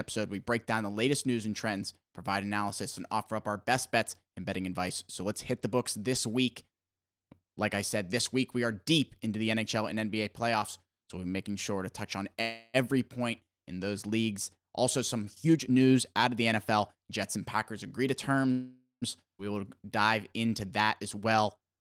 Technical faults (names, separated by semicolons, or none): call audio freeze; jitter buffer speed-up; skip ahead